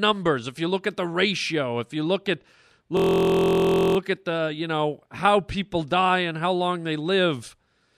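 A system hang loop runs from 2.97 to 3.97 s. The playback path stalled while the hardware kept replaying one 23.2 ms slice of its buffer, which fits a 1024-sample buffer. The slice repeats 43 times, producing a steady buzz at about 43 Hz.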